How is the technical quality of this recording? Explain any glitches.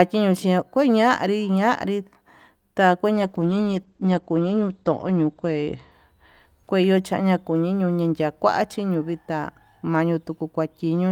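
There is one glitch, a call bitrate drop from 3.15 to 5.97 s. The encoder's rate falls, so speech turns coarse and watery, with highs cut off near 8 kHz. The sound fits a drop from about 48 to 12 kbps. Unlike packet loss, it stays continuous, without gaps or jumps.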